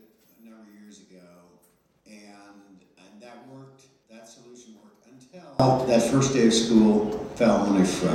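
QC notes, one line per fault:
0.0–5.6 s, one channel inverted: the sound collapses to a faint trace and the level falls by about 31 dB, recovering abruptly at 5.6 s. This is likely a polarity flip on one stereo channel, so everything common to left and right cancels on mono summing and only their small difference remains. On a waveform the segment sits as a near-flat, low-amplitude band; a spectrogram shows energy largely emptied across the band.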